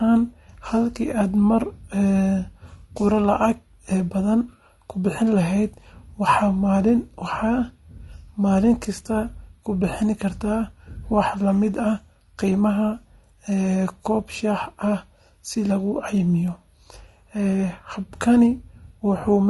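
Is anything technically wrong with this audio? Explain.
Yes. Throughout the speech, the voice sounds rough and grainy, with noise filling the gaps between harmonics and a thin, synthetic top end. The likely cause is low-delay AAC compression (AAC-ELD), whose short frames resolve pitch harmonics poorly. The damage fits a bitrate around 32 kbps.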